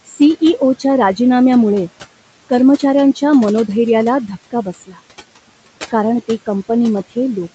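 Noise suppressor artifacts run through the whole clip. The suppressor estimates the steady room noise, which sits about 19 dB below the speech, and pulls down each frequency band it judges to be noise, frame by frame, by about 18 dB. The background therefore sinks in the gaps and swells back under the speech.

Speech cut by the noise suppressor follows from 4.51 to 4.99 s, right after "कर्मचाऱ्यांच्या मनोधैर्याला". Here the suppressor mistakes quiet parts of the speech for noise and turns them down along with the background, at worst by about 18 dB. Roughly a fifth of a second within that half-second stretch is affected, so the speech there sounds swallowed and faint before the level recovers, all under a top end that stops near 8 kHz.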